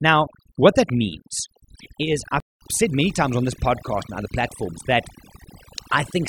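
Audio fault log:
throughout: overdone noise removal. Aggressive noise reduction pulls bands near the noise estimate down or off, leaving a lowered, twinkling background.
2.40–2.61 s: playback stall. After "what that means is", the speech cuts out for about 205 ms, then resumes with "said many times on", likely the player running out of data.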